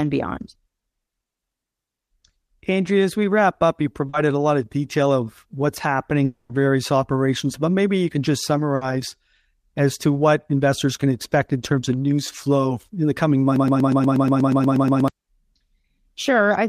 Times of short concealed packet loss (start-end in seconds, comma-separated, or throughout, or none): 4.09-4.15